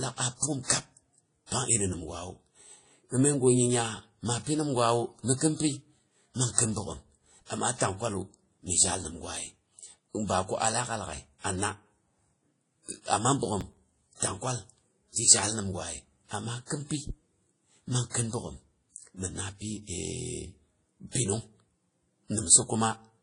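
Speech runs the full length with a layered, smeared coding texture and nothing above 10.1 kHz. On a spectrogram this appears as a flat ceiling plus patchy, blurred high bands. The likely cause is transcoding between lossy codecs, fitting a Vorbis pass near 50 kbit/s re-encoded as WMA near 32 kbit/s, with both sets of artefacts stacking. Processor overload crackle tears through the sound from 9.37 to 9.58 s and from 13.61 to 13.92 s. Several buffers of roughly 5 ms each were skipped, leaving tiny hard-edged gaps that show as notches in the waveform and thin vertical broadband streaks on a spectrogram.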